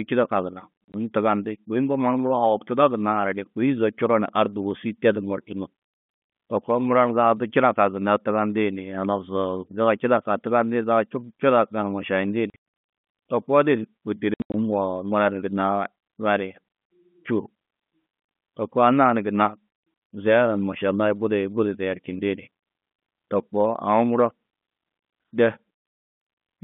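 Packets went missing on the way to the receiver, which played silence in their place, so the speech breaks into short dead holes with hard edges. The hole sizes step in multiples of 20 ms, which points to 20 ms packets. Right after "čidakã gunna", at 0.84 to 0.94 s, 80 ms drops out in bursts up to 40 ms. At 12.5 to 12.62 s, 360 ms is lost over a 640 ms spread, with gaps up to 100 ms. At 14.34 to 14.54 s, 160 ms goes, with gaps up to 80 ms. All of this sits inside a narrow G.711 telephone band that stops at about 3.5 kHz.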